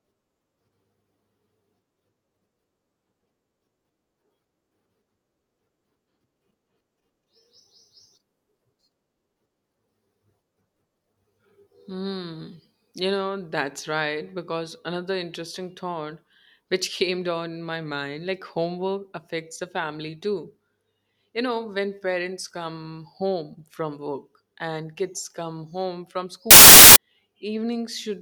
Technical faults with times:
26.51-26.96 samples built from the wrong bytes

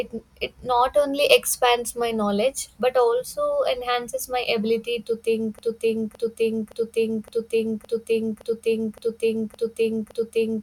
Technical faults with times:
5.59-10.62 broken-record loop

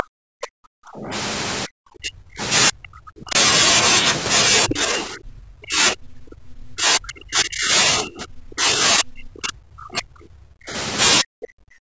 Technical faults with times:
0.00-1.12 speech suppressed in double talk
1.66-2.41 speech suppressed in double talk
2.69-3.36 speech suppressed in double talk
4.68-10.74 speech suppressed in double talk
4.69-4.75 other side's voice leaking through
11.21-11.98 speech suppressed in double talk

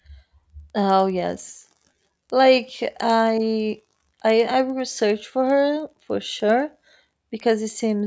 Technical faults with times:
0.00-8.07 resampler restarted on every block

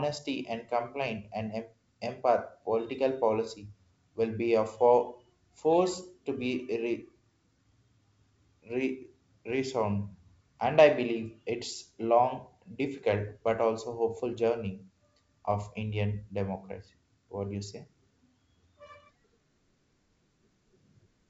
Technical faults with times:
none

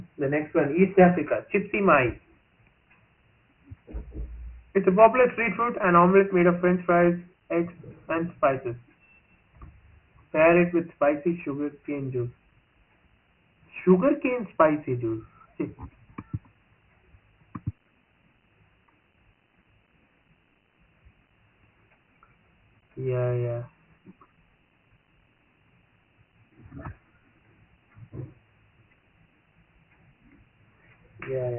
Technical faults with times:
0.00-31.58 Dialogic VOX ADPCM

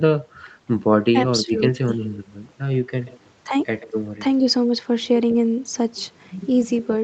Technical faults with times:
1.12-1.59 speech suppressed in double talk
2.89-3.19 echo leak
3.80-3.91 echo leak
5.30-5.34 echo leak

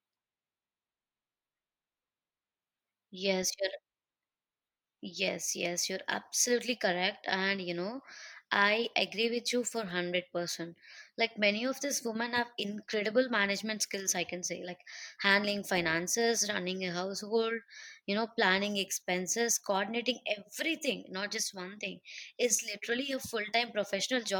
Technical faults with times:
none

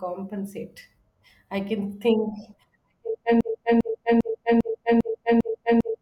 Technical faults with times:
3.41-6.01 broken-record loop

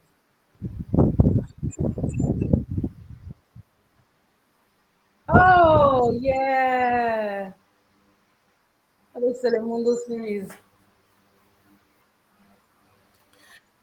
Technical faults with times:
none

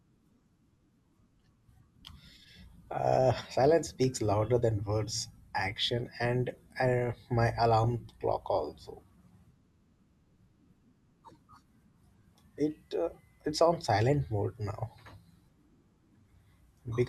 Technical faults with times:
7.84-8.09 DAB burbling

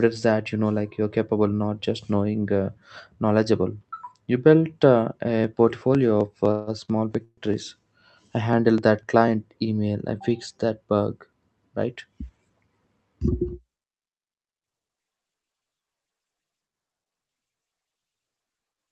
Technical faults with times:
6.51-6.70 call audio freeze
6.85-6.91 short stall from a late packet
7.24-7.49 call audio freeze
11.77-12.50 jitter buffer speed-up
17.70-18.88 jitter buffer speed-up

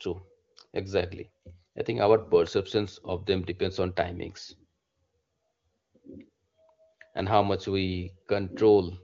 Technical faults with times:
none

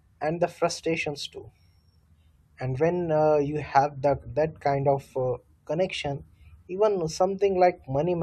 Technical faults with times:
none

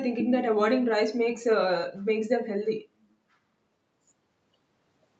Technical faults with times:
none

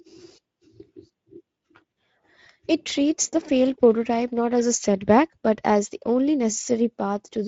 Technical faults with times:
0.00-7.47 Speex codec

